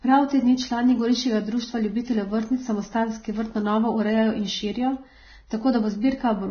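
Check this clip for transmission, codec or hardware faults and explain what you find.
One codec fault runs through the whole clip. Throughout the speech, nothing is present above 6.5 kHz, and the remaining treble sounds hissy and grainy, with roughened tones and smeared consonant attacks. This is likely Vorbis compression at heavy settings, consistent with a bitrate near 17 kbps: the encoder keeps a smooth spectral outline but quantises the upper band so coarsely that fine detail turns into noise.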